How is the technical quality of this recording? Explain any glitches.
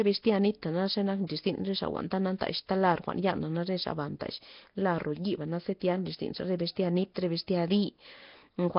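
Technical quality is poor. Throughout the clip, the speech carries a rough, hissy halo and a smeared, underwater character, with nothing above 5.3 kHz. The likely cause is Nellymoser compression, the old Flash microphone codec. It spends a fixed, small bit budget on short blocks, so weaker bands get no bits and are filled with noise. The heavy damage fits a rate near 22 kbps. On a spectrogram, energy stops sharply at 5.3 kHz, and the region below shows blocky, grainy noise patches in the weaker bands.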